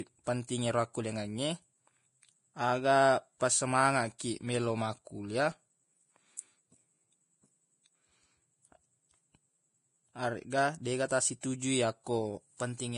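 Throughout the speech there is nothing above 10.5 kHz, and the remaining treble is hissy and grainy, with attacks blurred. This is most likely heavy Vorbis compression: the encoder keeps a smooth spectral outline but quantises the detail on top so coarsely that it becomes noise-like, and the damage level fits a bitrate around 28 kbps.

Pre-echo appears at 4.18 s, a brief hiss of about 18 ms just before "meloq makkulia", then from 11.08 to 11.11 s (about 22 ms) and from 11.41 to 11.43 s (about 25 ms). In each case a sharp onset sits late in a transform block, so quantisation noise scaled to the loud attack spills into the quiet moment before it, leaving a soft, smeared start.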